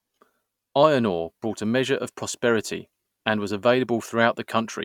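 No technical faults can be heard anywhere in this speech recording. Nothing in it calls for a timestamp or a note on how it was captured or processed.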